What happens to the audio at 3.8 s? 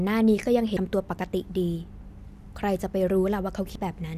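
At 3.76 s the capture side likely fell behind: the program failed to read its samples before the hardware overwrote them, so a dropped buffer (overrun) removed about a tenth of a second of speech. The material on either side is butted straight together with no gap of silence, so the sound jumps forward abruptly, with a short piece of speech simply missing.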